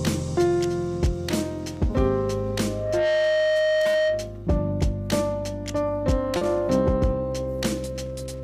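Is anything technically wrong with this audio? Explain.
Yes, there are two faults. From 2.56 s to 4.46 s there is loudspeaker feedback squeal. The microphone was picking up the loudspeaker it was driving, and at 621 Hz the loop gain rose above one, so that frequency kept reinforcing itself. It is heard as a single steady tone that swells over about half a second into a squeal sitting roughly 5 dB above the rest of the sound, then holds until it stops.

From 6.37 s to 6.43 s there is a short concealed packet loss. Around 40 ms of audio failed to reach the decoder in time, and the receiver covered the gap with about 40 ms of synthesised continuation based on the preceding sound before blending back into the real signal. The result is a brief smear or wobble where the sound seems to stall momentarily instead of moving on naturally.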